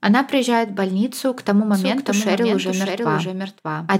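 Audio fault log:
1.74 s to end, doubled audio track. Just after "в больницу к тому", a second copy of the speech enters abruptly. It trails the original by about 0.7 s and sits about 5 dB lower. The copy is full-band and dry, with no decay or room colour, so it sounds like a flat echo of the same speech. It runs to the end of the clip. The likely cause is the same signal reaching the mix twice, once through a slower path.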